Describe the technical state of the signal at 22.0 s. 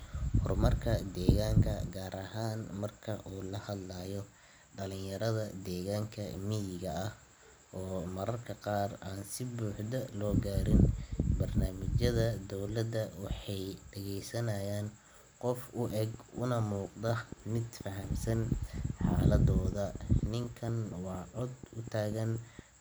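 At 22.0 s the speech is overlaid by a train of clicks. It runs from 15.90 s to 22.60 s. The clicks arrive at a steady 4.19 per second, around thirty in all. Each has much the same shape. They peak at about 5 dB above the speech. They are heard as regular ticking over the talk and through the pauses. The likely cause is interference from nearby equipment or a faulty connection or power supply.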